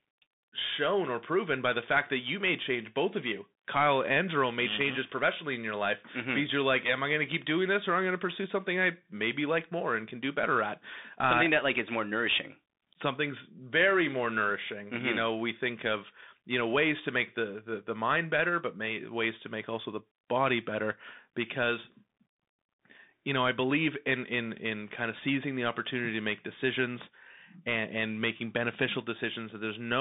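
A speech recording that runs its whole length through a Bluetooth CVSD headset codec. The band is squeezed to roughly 200 Hz to 3.7 kHz, so there is no low body and no air on top. The codec damage is plainly audible. CVSD sends one bit per sample, up or down, with an adapting step, which fits a 64 kbps link. Fast loud high sounds outrun that step and distort. Sibilants turn scratchy, and a granular hiss sits under the speech.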